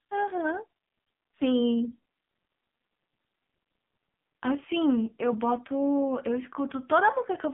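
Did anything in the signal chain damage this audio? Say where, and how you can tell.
Yes, the codec stage: heavy AMR narrowband mobile codec damage throughout. Nothing above 3.8 kHz, and the buzzy, synthetic quality fits a low mode around 5.9 kbps.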